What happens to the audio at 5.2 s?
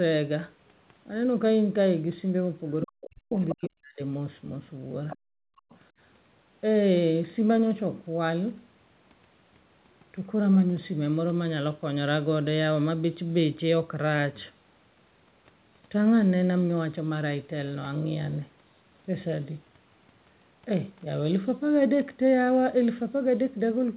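Just before 5.2 s, from 5.10 to 5.16 s, a brief scrap of another voice leaks into the speech. It sits about 15 dB below the talker. This is the other side's voice leaking through. The likely cause is a loudspeaker on the talker's device feeding the far end back into the microphone, with the echo canceller leaving a residue it should have removed.

At 5.2 s the speech itself collapses. From 5.20 to 5.45 s the talker's level plunges, at its deepest by roughly 40 dB. About 0.3 s of speech is affected. This is speech suppressed in double talk. Both sides were most likely talking at once. The echo canceller could not tell the near talker from the loudspeaker echo, so it turned everything down together.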